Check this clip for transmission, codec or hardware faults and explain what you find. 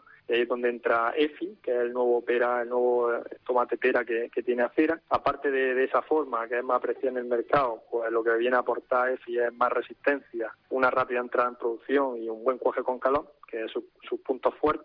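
Listening through the clip, nothing stood out as a problem.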